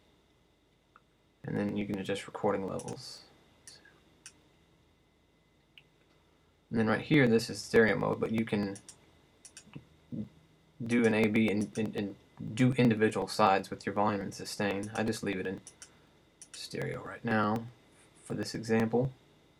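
Periodic USB or driver dropouts run from 0.07 s to 19.55 s, skipping roughly a millisecond every 0.124 s, heard as steady ticks while sound plays.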